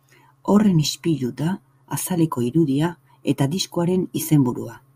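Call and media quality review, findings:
No faults found in this speech recording. Nothing to log for this ticket.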